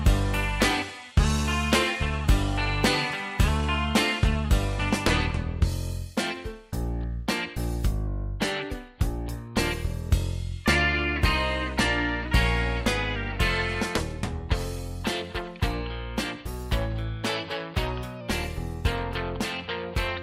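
Clock-matching software likely changed the playback rate in single steps, a drift correction step, to refill or drain its buffer. From 8.07 to 9.06 s it ran about 6% slow, dropping the sound roughly a semitone (−107 cents). From 12.25 to 13.16 s and again from 16.47 to 18.21 s it ran about 6% fast, raising the pitch about a semitone (+101 cents). Each time, speed and pitch shift together and then snap back.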